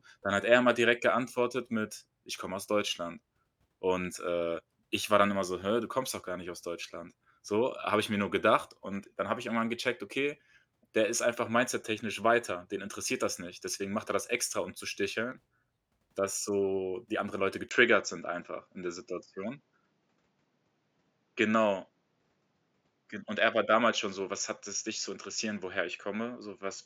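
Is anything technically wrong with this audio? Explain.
Yes. From 17.69 s to the end, the speech turns duller, with nothing above 7.6 kHz, after a 20 ms gap. This is likely an input switched to a poorer device. On a spectrogram the top band abruptly empties, and the waveform shows a brief flat gap, with steady level and a faint new noise floor.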